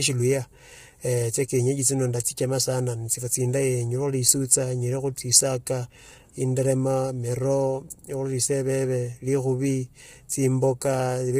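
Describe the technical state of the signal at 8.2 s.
At 8.2 s the speech has the same rough, grainy texture it carries through the whole clip, with a hiss-like fill between the harmonics and a top band that sounds thin and synthetic, stopping dead at 15.6 kHz. That's likely low-delay AAC compression, the AAC-ELD kind used on video calls. Its short frames can't separate pitch harmonics cleanly, and the heavy damage here points to a low bitrate, something around 24 kbps.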